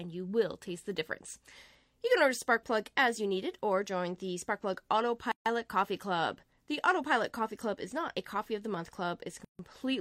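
At 5.32 s and again at 9.45 s the continuous sound drops into silence for about 143 ms and 146 ms, with smeared edges, then resumes where it stopped. Each is a gap at a join of encoded pieces, where untrimmed encoder start delay and last-frame padding remain.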